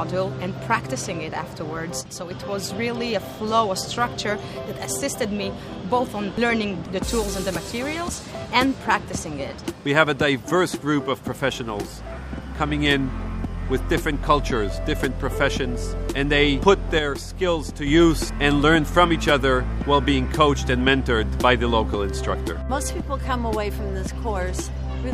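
At 2.01 s the sound abruptly falls by about 6 dB and stays lower until 2.31 s, then snaps back to full level. The same sudden dip recurs from 16.99 to 17.87 s. The likely cause is one channel dropping out of a stereo feed. Once that is folded to mono, material shared by both sides loses half its contribution, and anything carried only on the missing side disappears for those stretches.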